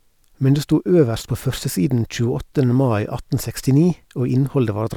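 No technical faults can be heard anywhere in the recording; the signal stays continuous and undisturbed for its whole duration.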